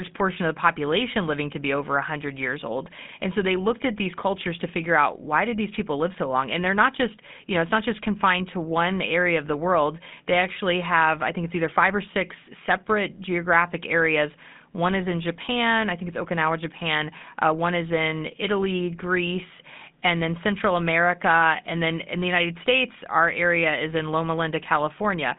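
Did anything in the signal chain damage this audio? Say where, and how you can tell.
Yes, at the codec: GSM full-rate damage throughout, with buzzy, gravelly roughness consistent with about 13 kbps, unlike a plain narrowband telephone line, which would cut everything above 3.6 kHz without that grain.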